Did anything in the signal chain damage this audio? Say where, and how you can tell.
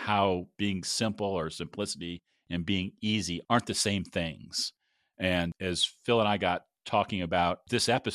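Yes, DAB burbling from the codec stage on weak reception: burbling at 0.83–0.89 s, before "or simplicity and being", and 3.80–3.82 s, after "being easy aren't the". Uncorrected bit errors corrupt the MP2 audio data, putting short blips of noise in single sub-bands. Unlike packet-loss dropouts, the sound never goes silent.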